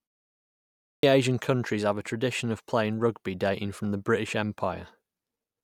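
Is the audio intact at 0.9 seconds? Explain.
No, 0.9 seconds falls inside a clipped start after a pause, running from 0.75 to 1.03 s. After the 0.75 s of silence the output device had dozed off, so the first 0.28 s of speech gets swallowed and it starts abruptly, missing its opening sounds.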